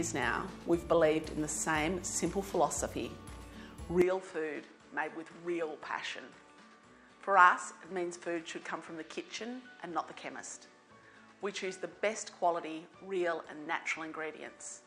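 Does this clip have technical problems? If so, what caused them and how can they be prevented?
Yes. At 4.02 s the input was likely switched to a poorer device for the rest of the clip. The sound turns duller, with nothing above 9.8 kHz, drops a few dB quieter and gains a faint new noise floor, without a gap. Locking the input device before recording prevents this.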